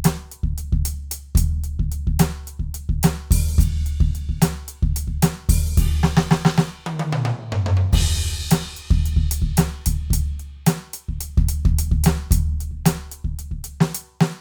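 No technical faults are audible anywhere in this music recording; the signal holds steady throughout.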